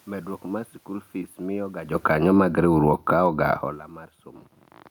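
A speech recording with two automatic gain faults that overlap. The first is automatic gain falling, from 1.9 s to 4.27 s. The gain control judged the input too loud and lowered its gain gradually, by about 6 dB. Voice and room noise sink together. From 2.35 s to 3.8 s there is also automatic gain rising. Here the gain control judged the input too quiet and pushed its gain up by about 4 dB. Voice and background swell together. Because the room noise moves with the voice, these are gain changes. The talker's own shifts in distance, around 2 s and 3.5 s, change only the voice.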